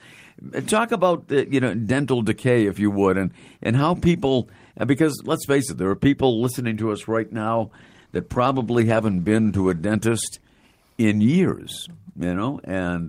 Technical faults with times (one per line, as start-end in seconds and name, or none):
7.59-9.90 call bitrate drop